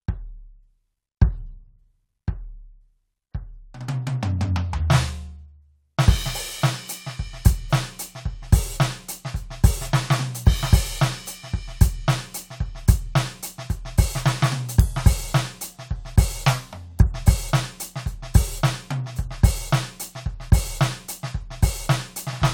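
No technical faults can be heard in this music.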